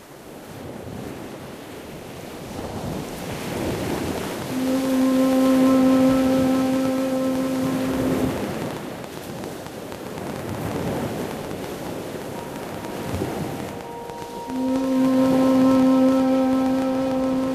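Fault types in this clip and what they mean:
Train of clicks: A run of short, similarly shaped impulses starts at 3.71 s and continues to 17.45 s, about a hundred in all at roughly 8.5 per second, with uneven spacing. They poke out around 10 dB above the surrounding audio and tick through quiet passages as well as louder ones. The likely cause is an intermittent electrical disturbance, such as nearby equipment interference or a faulty connection or power supply.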